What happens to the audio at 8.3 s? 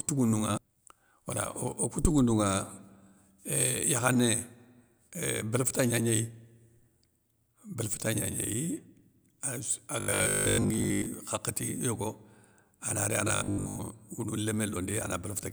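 Nothing goes wrong at 8.3 s: the speech runs on intact through that moment, with no dropout, click, distortion or other fault.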